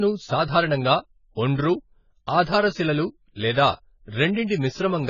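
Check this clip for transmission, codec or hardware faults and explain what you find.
One codec fault runs through the whole clip. AAC compression, from start to end: the speech stops dead at 7 kHz and sounds dull and smeared, with heavy warbling on sibilants and sustained sounds. Coarse quantisation of each frame's spectrum fits an AAC-LC encoder starved of bits, likely running near 16 kbps, which lowers its cut-off and leaves spectral holes.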